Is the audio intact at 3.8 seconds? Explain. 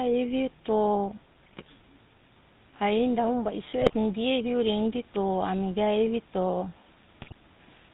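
No. GSM bit errors corrupt the speech from 3.80 to 3.95 s. Over a weak radio link, flipped bits reach the decoder and spoil the stored filter, pitch and gain values, so each damaged frame is rebuilt with a bent spectrum or a sudden jump in level. The result is a brief burst of squawking, popping and gargling lasting about 0.15 s. That span fits roughly seven 20 ms frames hit by an error rate of a few percent.

Underneath that burst, and across the whole clip, the GSM full-rate codec is plainly audible. The codec rebuilds the voice by passing a regular pulse train through a model of the vocal tract, keeping only every third sample of that excitation, and it discards everything above 4 kHz. That gives the speech a dull, band-limited tone with a buzzy, gravelly roughness, consistent with the 13 kbps full-rate scheme.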